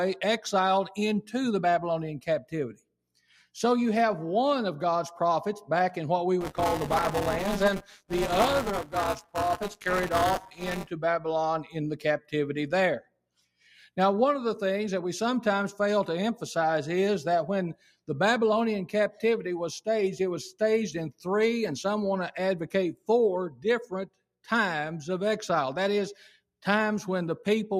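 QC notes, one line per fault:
Throughout: noise suppressor applied to music or sounds. A speech-tuned suppressor is treating sustained tones, ambience and tails as noise, pulling them down by roughly 5 dB while attacks pass, so the sound pumps and thins as the gain rises and falls.
2.2–2.53 s, 2.72–2.95 s, 3.15–3.46 s, 13.0–13.44 s, 17.74–18.08 s, 22.94–23.09 s, 23.5–23.65 s, 24.06–24.23 s: sound cut by the noise suppressor. The suppressor misjudged these passages as noise and clamped them hard, by about 9 dB to about 22 dB. Each costs about 150 to 300 milliseconds of sustained or decaying sound, which dips or is truncated abruptly.
6.41–10.91 s: buffer tearing. The writing program and the hardware reader have slipped so they cross within each buffer period. About a fifth of each buffer replays audio some 20 ms old, hard-joined both sides, giving a steady 200 Hz robotic buzz under the signal, which fits a 5 ms buffer period.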